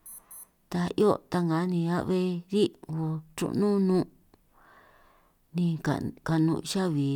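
No technical faults can be heard.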